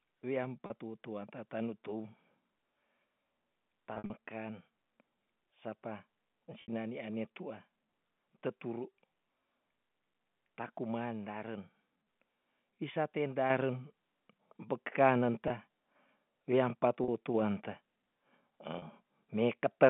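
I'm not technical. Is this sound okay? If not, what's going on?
No. The speech has two kinds of fault.

Packet loss with pitch repetition occurs at 0.66 s, 3.94 to 4.10 s, 6.62 s (just before "ane tua"), 15.48 s, 17.04 s (right after "weam pa") and 18.78 s. Small pieces of the audio never arrived. To cover each gap, the receiving end repeated the last bit of voice it had, so you hear a brief held, buzzy sound lasting from 20 to 60 ms. Around 4 s several short gaps are spread over about a sixth of a second.

Microphone volume stepped up happens at 13.5 s and again at 17.34 s. The calling software decided the microphone was too quiet and turned its input up all at once instead of gradually. The voice and any background sound jump louder together at those moments, in two separate steps. The normal narrow, phone-like tone of the line is still heard through these changes.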